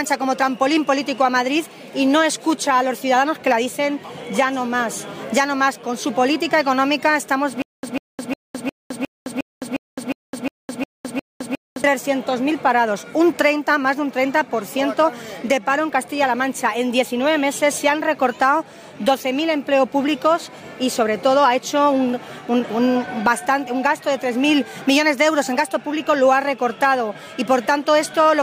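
From 7.62 to 11.84 s, a stutter with silent gaps. A 145 ms burst repeats every 357 ms between dead silences. A stalled stream is the likely cause.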